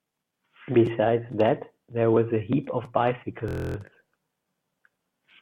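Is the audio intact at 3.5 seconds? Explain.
No. From 3.48 to 3.76 s a system hang loop replays one 23.22 ms block twelve times, fitting a 1024-sample buffer, giving a steady 43.1 Hz buzz. The waveform shows identical repeating cycles, and the spectrogram shows evenly spaced horizontal lines 43.1 Hz apart.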